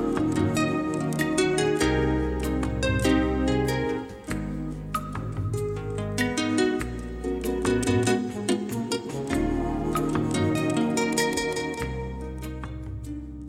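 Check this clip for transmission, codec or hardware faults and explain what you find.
I found no faults to report in this clip.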